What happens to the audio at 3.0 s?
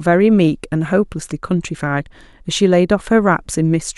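At 3.0 s the audio carries on intact, with no dropout, click, distortion or other fault audible at that moment.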